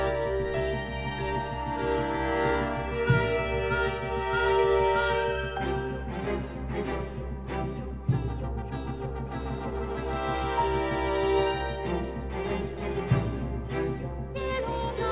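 Nothing in the clip stood out as a technical fault on listening.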